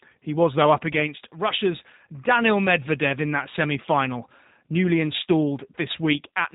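From start to finish the speech has passed through G.729 codec coding, and its character points to an 8 kbit/s G.729A-style coder. Instead of sending the waveform, the coder transmits a vocal tract filter, a pitch predictor and a few pulses per 10 ms frame, then rebuilds the speech from them. Everything above 4 kHz is gone, so sibilants lose their edge. The voice stays intelligible but sounds plainly rough and slightly synthetic.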